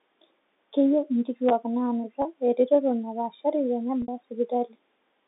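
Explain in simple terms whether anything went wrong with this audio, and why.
Packet loss with pitch repetition occurs twice: at 2.22 s, just after "inkituak naanuta", for about 30 ms, and at 4.02 s for about 60 ms. The receiver filled each gap by repeating the last pitch cycle, so the first sounds like a brief held buzz, while the longer second one fades into silence before the speech returns with a short cross-fade.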